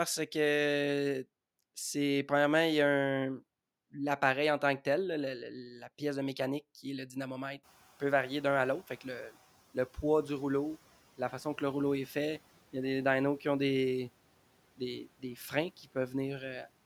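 At 7.63 s, just after "qui est le dynamomètre", the room noise jumps by about 23 dB and the noise suppressor is caught lagging. It passes the louder noise with little reduction, then over 1.75 s pulls it down about 8 dB, ending by "le poids du rouleau". A spectrogram shows a bright noise band fading by 9.38 s.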